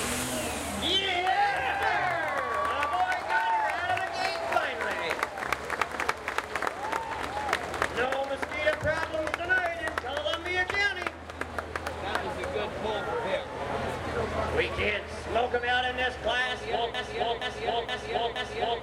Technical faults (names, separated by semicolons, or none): broken-record loop